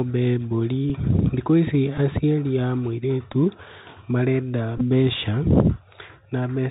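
Bluetooth CVSD headset codec runs through the whole speech clip, and its damage is plainly audible. The sound is limited to narrowband: nothing above 4 kHz survives. CVSD sends one bit per sample, up or down, with an adapting step size, which fits a 64 kbps stream. Loud high-frequency energy outruns that step and distorts, s sounds come out scratchy, and a granular hiss sits beneath the speech.

Bluetooth headset packet repeated occurs four times. At 0.90 s, just before "thikũ ici aciari a", one packet is lost and the previous packet's bits are decoded again, leaving a small tick. At 1.98 s, between "thikũ ici" and "aciari a", two packets go missing, so the repeat is longer. Another two-packet repeat follows at 3.33 s. From 4.78 to 4.82 s, repeats are scattered over about 30 ms, with the longest run around 10 ms. Where repeats run together, they recur every 3.75 ms, giving a brief buzz near 267 Hz.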